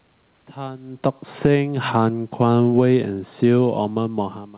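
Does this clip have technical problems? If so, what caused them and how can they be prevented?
Yes. Automatic gain falling runs from 0.90 to 4.51 s. The gain control judged the input too loud, or its background noise too strong for the gain it started with, and turned its gain down gradually, by about 7 dB over those three and a half seconds. The speech and the room noise behind it sink together, which is the sign that the level change comes from the processing rather than the talker. To prevent it, lower the microphone's input level so the gain control doesn't see an overload, or set a fixed gain instead of automatic control.

Automatic gain rising runs from 1.52 to 2.13 s, overlapping the slower fall. Here the control judged the input too quiet and raised its gain by about 7 dB in roughly 0.6 s, so the voice and background noise swell upward together. To prevent it, give the gain control a slower, more consistent response or disable it and set the level once.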